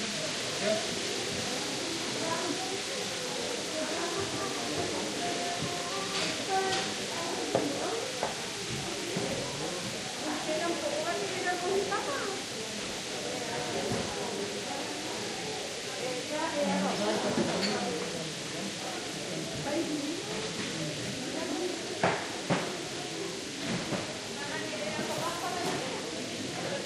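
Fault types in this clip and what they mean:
Overlapping chunks: the audio was handled in 6 s blocks, and one block started before the previous one had ended, so 23 ms of sound is played twice at that join, heard as a brief click or stutter from 21.52 to 21.54 s.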